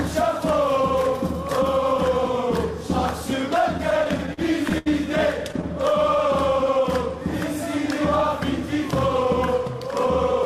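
From 3.77 to 4.88 s, repeated stalls (stutter): nine late-packet gaps, up to 76 ms, get filled by holding the last sound, so it halts jerkily without losing anything. From 5.93 to 6.84 s, a jitter buffer slow-down repeats short pitch periods, adding 45 ms and running at 96% speed, drawing out sounds with unchanged pitch.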